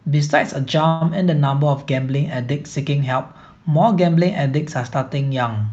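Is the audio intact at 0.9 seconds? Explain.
No. A call audio freeze runs from 0.87 to 1.03 s: the last sound is stretched into a fading buzz for 135 ms, likely because delayed packets emptied the jitter buffer. The audio then resumes where it stopped, with nothing lost.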